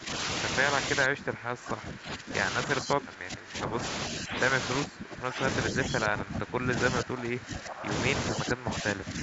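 Speech suppressed in double talk at 0–0.09, 1.05–2.34, 2.67–3.82, 4.11–4.40, 4.79–5.42, 5.72–7.91 and 8.34–9.22 s: the speech dips by about 10 to 20 dB or breaks into fragments, likely because an echo canceller mistook overlapping far-end talk for echo and ducked both.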